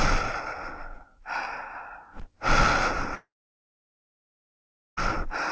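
From 3.15 s to 4.99 s the sound breaks off. The last sound briefly carries on and fades, then about 1.7 s of silence follows before audio returns, with the missing 1.8 s simply gone. This is likely a long network dropout, with the receiver filling the gap until packets arrived again. Throughout, nothing is heard above 8 kHz, which fits G.722 at 64 kbps on the call path.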